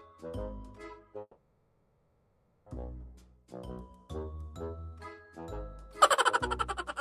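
At 1.21 s the sound stalls into a fading buzz that trails off to near-silence, and it doesn't pick up again until about 2.69 s. That's a call audio freeze, most likely packets held up in transit so the jitter buffer ran dry and the receiver stretched the last bit of sound to fill about 1.45 s. Nothing's actually lost: the audio resumes right where it stopped, just that much later.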